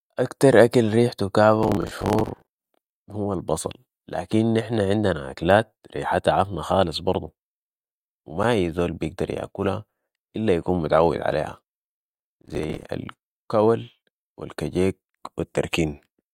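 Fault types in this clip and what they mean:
processor overload crackle: missed buffer deadlines refill slots with stale audio, so from 1.63 to 2.94 s and 11.84 to 12.86 s a gritty tearing rides on the speech, not clean gaps.
block of digital silence: a single 8.7 ms run of zeros at 8.43 s cuts the speech to dead silence with hard edges, one isolated tick rather than sustained crackle.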